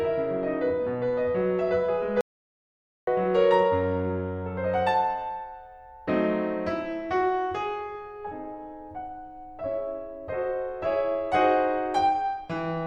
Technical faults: audio dropout to silence

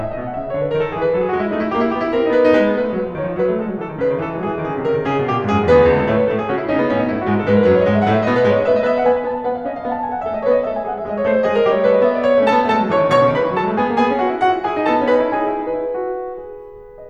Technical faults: none

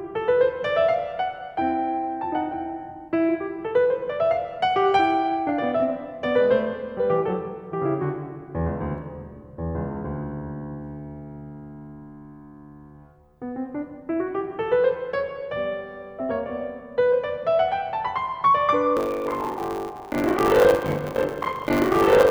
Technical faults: buffer tearing

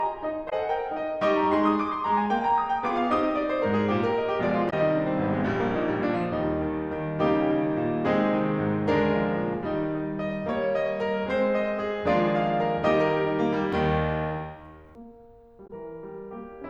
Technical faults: damaged data in a compressed stream

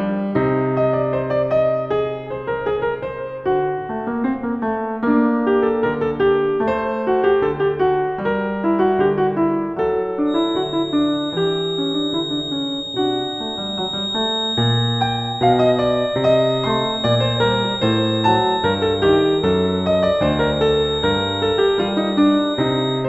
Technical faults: feedback whistle

